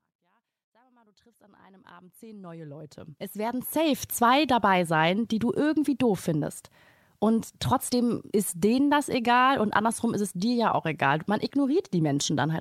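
Speech with no technical faults.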